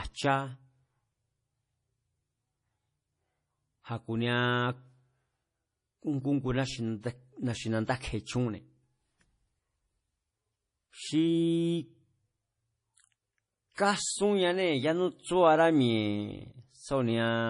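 Speech throughout has a hard treble ceiling at 10.5 kHz, with watery, swirling sibilants and smeared consonants, likely heavy MP3 compression at a bitrate near 32 kbps; band-limited swirl, not broadband hiss, marks it as codec damage. At 13.75 to 13.78 s, pre-echo puts a 30 ms smear of hiss just before an attack, unlike a click, which sits on the onset itself.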